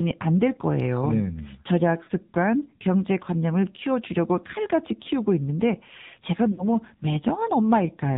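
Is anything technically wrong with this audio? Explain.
Yes, two things. The whole clip has gone through the AMR narrowband mobile codec. Nothing above 4 kHz survives, and the speech sounds plainly buzzy and synthetic. That damage fits a low mode of around 7.4 kbps, where the decoder rebuilds the voice from a vocal-tract model fed with only a few pulses.

There are also lost AMR speech frames, at 2.04 to 2.09 s and 6.52 to 6.76 s. When frames go missing, the decoder reuses the last good pitch and filter settings at falling gain. You hear the sound briefly smeared and sagging, with a longer drawn-out fade in the second spot. The first sounds like about two frames gone and the second like about three.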